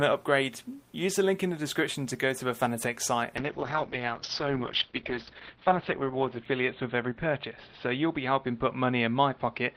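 Up to about 3.38 s the audio is full and open, then a call bitrate drop kicks in and stays through to the end. The bandwidth estimate sank and the encoder was starved of bits. The step down sounds like roughly 32 kbps falling to something near 7 kbps. Audio bandwidth shrinks from around 20 kHz to 4 kHz, so the top end vanishes and everything goes muffled and rough, with a watery, smeared texture. It sits at its worst for about 2.13 s.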